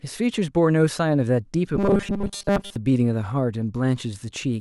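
From 1.76 to 2.76 s the speech takes on robotic sound from repeated short buffers: a rigid, metallic buzz at 200 Hz. That fits a 5 ms fragment being looped for most of the stretch, likely because new audio arrived too seldom. Unlike plain dropouts, the sound is filled with repeats rather than gaps.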